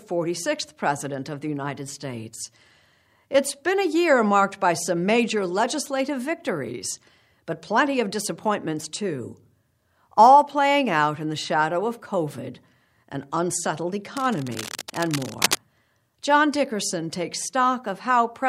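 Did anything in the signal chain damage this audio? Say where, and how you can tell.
Yes: cable scratch noise from 14.17 to 15.57 s, a dense uneven rustle nearly as loud as the speech, likely a worn analogue connector shifting contact, unlike isolated digital clicks.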